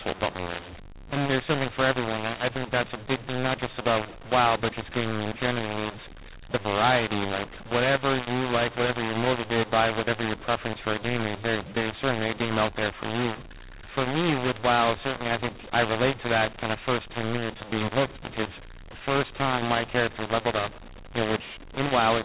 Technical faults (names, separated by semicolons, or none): mu-law and A-law mixed up